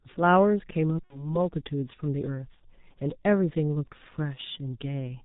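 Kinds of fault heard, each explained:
G.723.1 codec: An early low-rate telephony coder runs through the whole speech clip, and the heavy damage suggests a rate near 6.3 kbit/s. Nothing comes through above 4 kHz, so the sound is muffled, and the slowly updated voice model gives a hoarse, rough texture with smeared consonants. Unlike plain band-limiting, which only dulls the top end, this adds a grainy, coarse quality to the voice.
VoIP packet loss concealed by the speech codec: Around 1.04 s, 60 ms of audio goes missing, which fits two lost 30 ms frames. The decoder fills the gap by repeating its last pitch and filter at falling gain, producing a brief stretched sound that fades. Because each frame builds on the previous one, the voice stays weak and distorted until about 1.40 s. A simple dropout would instead leave clean silence or a sharp click.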